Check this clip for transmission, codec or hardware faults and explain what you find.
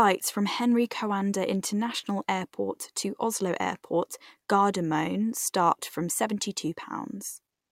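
Nothing stood out on listening to this speech recording.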